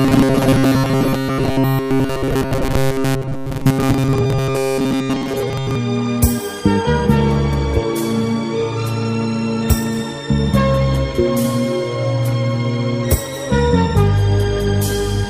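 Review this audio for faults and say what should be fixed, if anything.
Robotic sound from repeated short buffers runs from 0.01 to 5.75 s, where a rigid metallic buzz at 134 Hz overlays the sound. The likely cause is a starved audio path looping its last block of about 7.5 ms while most of the real audio is skipped. To prevent it, give the audio thread a larger buffer margin or higher scheduling priority so fresh data always arrives in time.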